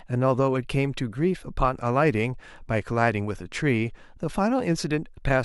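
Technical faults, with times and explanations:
Nothing technical jumps out here; the speech just runs its course without any dropouts, glitches or other trouble to point to.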